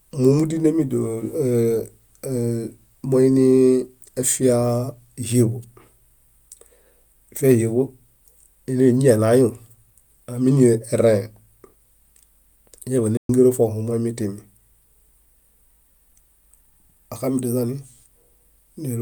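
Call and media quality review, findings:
Playback stall, 13.17–13.29 s: speech cuts out mid-flow for about 120 ms, then resumes. Likely the player's buffer ran dry or its output thread got blocked, so nothing reached the device until it caught up. Worth checking buffering on the playout side.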